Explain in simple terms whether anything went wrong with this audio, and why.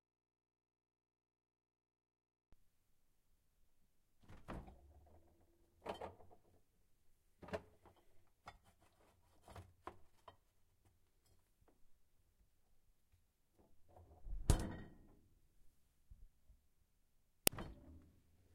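Two things went wrong. The clip opens in an audio dropout to a faint residue: until 2.53 s there's only low hum, likely because the signal was lost while the input stayed live. Then at 17.47 s an uninitialised buffer plays leftover memory as sound, making a loud crack about 1.5 ms long.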